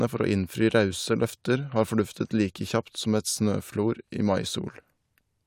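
No technical faults can be heard anywhere in the recording.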